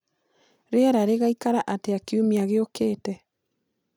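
No technical faults can be heard anywhere in the recording. The speech continues without any audible problem at any point.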